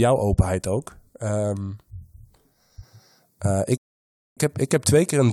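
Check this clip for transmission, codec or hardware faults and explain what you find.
One fault: a rebuffering stall from 3.77 to 4.37 s. Playback ran dry and froze, adding 0.59 s of silence, then resumed exactly where it stopped. Unlike a dropout, no speech is lost.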